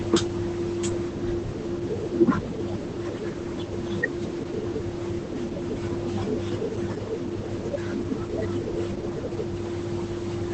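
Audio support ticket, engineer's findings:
Opus voice compression, whole clip. Speech muffled and slightly hoarse; coding damage plainly audible. Spectrogram shows a flat ceiling with nothing above 8.6 kHz. Wideband SILK coder with coarse excitation coding, which fits a low bitrate around 12 kbps.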